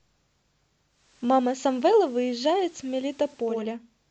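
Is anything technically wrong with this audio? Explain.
Yes. From 0.88 to 3.70 s, the speech shows digital radio blending to analogue. The receiver lost digital and cross-faded over about 0.39 s to FM, adding hiss around 30 dB down and a level shift of about 2 dB.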